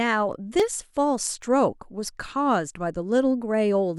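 Speech with three sharp single clicks at 0.60, 1.42 and 2.26 s. They are likely dropped samples, each losing well under a millisecond, so the waveform jumps abruptly.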